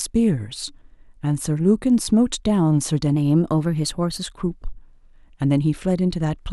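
From 3.15 to 4.23 s the speech suddenly runs about 6.4% fast and sits 107 cents sharp, roughly a semitone, then snaps back. That's a drift correction step, likely clock-matching software jumping the playback rate at once to rebalance its buffer.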